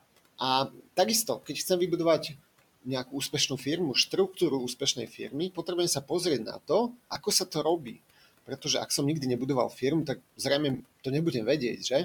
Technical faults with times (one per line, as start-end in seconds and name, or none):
0.70-0.86 speech cut by the noise suppressor
2.85-3.66 speech cut by the noise suppressor
4.80-5.68 speech cut by the noise suppressor
6.53-7.97 speech cut by the noise suppressor
7.13-7.16 lost LE Audio frames
8.46-8.90 speech cut by the noise suppressor
9.70-10.40 speech cut by the noise suppressor
10.74-10.80 lost LE Audio frames